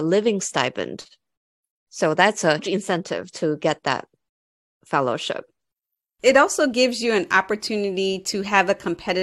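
At 2.58 s there is a brief glitch in the speech. This is damaged data in a compressed stream. Part of the encoded stream was corrupted there. The decoder misread those frames, lost sync, and searched for the next valid frame header before recovering.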